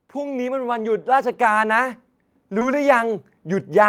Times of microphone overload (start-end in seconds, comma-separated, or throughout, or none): none